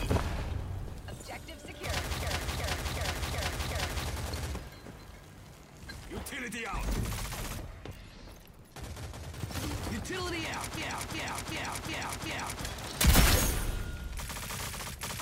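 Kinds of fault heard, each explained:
System hang loop: a frozen system left the hardware replaying one 0.37 s buffer chunk five times, from 2.23 s and 10.77 s; waveforms show identical repeating blocks, spectrograms vertical stripes.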